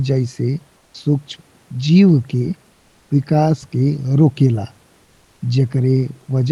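From 0.77 to 0.94 s, the sender likely paused transmission during a gap in speech, so comfort noise in place of the background fills those 170 ms: a flat, featureless hiss about 11 dB quieter than the real room.

At 0.91 s, the voice detector was likely slow to register returning speech, so the onset is clipped by about 30 ms, and the sound starts abruptly without its soft beginning.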